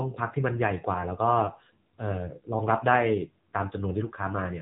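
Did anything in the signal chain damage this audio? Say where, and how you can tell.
Yes. AMR narrowband mobile codec damage runs throughout: the speech cuts off near 3.8 kHz and its sparse pulse-driven vocal-tract model sounds buzzy, fitting a 7.4 kbps mode.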